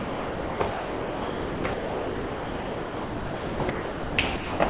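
Sound dropped by the voice detector occurs five times in this clip of sounds: 0.0–0.6 s, 0.7–1.64 s, 1.74–3.6 s, 3.7–4.18 s and 4.36–4.6 s, with only brief stretches of real sound between them. Each time, the sound gives way to steady comfort noise and returns when transmission resumes. The likely cause is the sender's detector treating non-speech sound as background and halting transmission, so the receiver filled the gaps, the longest lasting about 1.9 s. The call path leaves nothing above 4 kHz, which points to a narrowband telephone codec.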